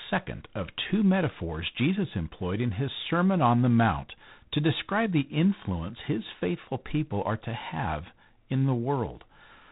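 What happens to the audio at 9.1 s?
At 9.1 s the speech carries a harsh, rasping hiss that rises and falls with its level, and the sound is dull, with nothing above 4 kHz. This is G.726 ADPCM damage, present across the whole clip rather than at this moment alone. The codec sends only a few bits per sample describing how each sample differs from a running prediction. The coarseness heard here fits the 24 kbit/s mode, whose reduced bits leave plainly audible quantisation noise riding on the speech.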